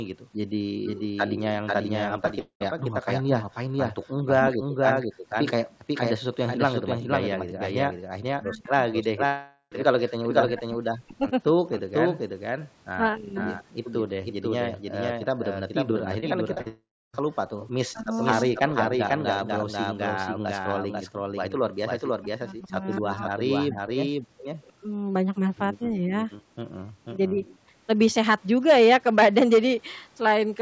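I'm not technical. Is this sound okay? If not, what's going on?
No, there's quite a bit going wrong here, most of it typical of a call that struggled.

First, there's a doubled audio track running the whole way through. A second copy of everything trails the original by about half a second, at the same loudness, so each stretch of speech gets an echo that's clean and sharp rather than roomy. It most likely comes from the same audio being captured twice by two paths running out of step, or from an edit that left two copies overlapping.

Then there's background gated by the echo canceller. The echo canceller, the part of a call that stops the loudspeaker feeding back into the microphone, clamped the mic down hard while the far side was playing. The room sound briefly drops away to near nothing and then returns. You can hear this at 0.25 to 0.37 seconds, in patches between 5.66 and 8.06 seconds, between 12.59 and 17.60 seconds, at 24.24 to 24.41 seconds, and as a lighter dip around 27.7 seconds.

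Related to that is speech suppressed in double talk. The speech dips sharply or cuts out in pieces between 0.8 and 5.24 seconds, 8.34 and 13.38 seconds, and 17.93 and 27.44 seconds. The likely cause is both sides talking at once, so the echo canceller couldn't tell the local voice from the loudspeaker and turned everything down. In total about seven or eight seconds of speech is affected like this.

There's one short concealed packet loss at about 2.28 seconds. A few hundredths of a second of data never arrived, and the receiver papered over it by stretching the last bit of sound. It comes across as a tiny smear.

Bigger are the long network dropouts, at 2.39 to 2.62 seconds, 9.26 to 9.73 seconds, and 16.68 to 17.21 seconds. Most likely nothing arrived from the network for those stretches. The receiver kept the last sound going as a fading buzz, then left silence, and the speech picks up again with that piece simply gone. 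The last of these three is the worst, with about a third of a second of dead air.

Just before that last dropout, from 16.20 to 16.68 seconds, there's repeated packet loss, the robotic sound. Data went missing four times in quick succession, each hole patched over before the next one hit. The result is a choppy stretch with little bits missing.

Finally there's echo leak, at 17.60 to 18.23 seconds and again from 22.92 to 28.43 seconds. Faint scraps of speech come back about a quarter of a second late. The likely cause is someone on a loudspeaker whose echo canceller didn't catch everything, so their mic sent part of the call back. It's quiet, and quieter still in the second stretch, but it's there.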